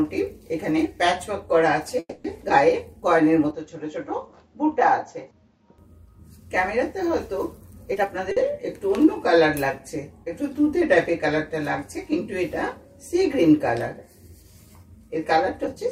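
At 1.99 s a call audio freeze, likely from delayed packets draining the jitter buffer, fills about 250 ms with a fading buzz or hiss and 40 ms of silence, then the sound resumes intact. The waveform shows a decaying smear and a brief flat gap.

From 3.51 to 5.78 s the input likely switches to a poorer device. Nothing passes above 7.6 kHz, the level drops about 5 dB, and a new noise floor sits roughly 45 dB down. On a spectrogram the upper band goes abruptly empty, with no silence at the switch.

At 7.91 s a jitter buffer speed-up trims roughly 100 ms of pitch periods, so the sound runs at 128% speed without a pitch change. The spectrogram shows the same harmonics, compressed in time.

At 8.32 s a short stall from a late packet holds the last sound for 50 ms, then continues without loss. It appears as a brief repeated waveform segment.

At 15.64 s a second speed-up runs at 124% and removes about 70 ms, hurrying the final moments.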